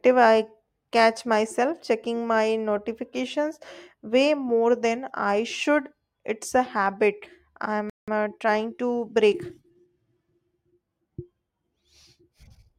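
At 7.90 s the speech cuts out abruptly and stays silent until 8.08 s, a gap of about 180 ms, before resuming where it left off. This playback stall was likely caused by the player running short of buffered data or having its output thread held up. On a waveform the signal drops to silence mid-phrase with no fade. A spectrogram shows a clean vertical band of empty space across all frequencies.

From 8.08 to 9.88 s the speech runs hurried, at about 1.1 times normal speed, while its pitch stays where it was. This is time-compressed catch-up, with the player clearing its backlog by removing short slices and cross-fading the joins. A waveform shows syllables packed closer together. On a spectrogram the harmonics keep their spacing, but the segments sit nearer one another.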